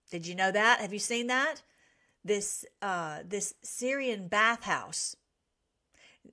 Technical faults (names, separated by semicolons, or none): none